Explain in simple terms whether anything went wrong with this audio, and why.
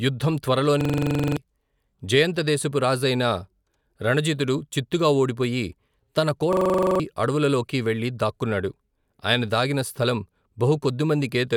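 Twice, the computer briefly froze while the sound hardware kept replaying the last scrap of audio it held, a fault called a system hang loop. The same 43 ms snippet repeats about 23 times a second, giving a rapid machine-gun stutter, which fits a 2048-sample buffer. It happens from 0.81 to 1.37 s, and again from 6.53 to 7.00 s, between "రణజితుడు చిత్తుగా ఓడిపోయి తన" and "అడవులలోకి వెళ్లి దాక్కున్నాడు ఆయన". Each time, roughly half a second of real speech is lost.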